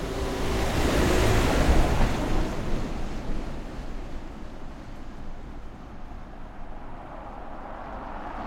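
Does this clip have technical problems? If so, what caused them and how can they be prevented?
No, there are no technical problems in this audio.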